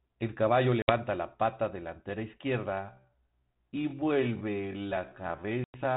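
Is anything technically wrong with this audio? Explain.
Yes. Two kinds of fault can be heard.

Packet loss on an ADPCM call occurs twice: about 60 ms missing near 0.82 to 0.91 s, and about 100 ms near 5.64 to 5.76 s, each a few packets' worth. Silence fills each gap. The decoder's adaptive predictor and step size then lose step with the sender's, so the speech comes back slightly distorted before settling. A waveform shows flat-line holes with abrupt edges. A spectrogram shows blank vertical bands, confined like the rest of this G.726-style telephone audio to below 4 kHz.

A time-stretched section runs from 2.69 s to the end. The speech abruptly slows to about 0.6 times its pace while the pitch stays the same, which makes it drag. This is likely caused by software repeating short slices to lengthen the audio. A spectrogram shows harmonics at unchanged heights but drawn out, with repeated, stuttering texture.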